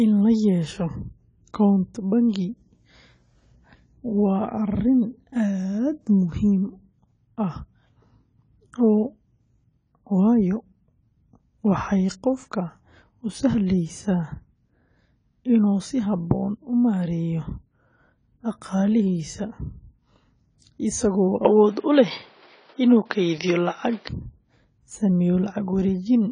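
From start to finish the speech is band-limited at 10 kHz, with a dull, smeared quality and a warbling, fizzy texture on sibilants and sustained sounds. This is likely AAC compression at a low bitrate, consistent with about 24 kbps, where coarse quantisation strips the top octave and blurs detail.

Between 21.45 and 24.09 s the sound abruptly turns boxier, with nothing above 5.9 kHz, a level shift of roughly 5 dB, and a new noise floor well beneath the speech. There is no gap at either change. The likely cause is an input switched to a poorer device with a narrower band and a different tone before the original input returns.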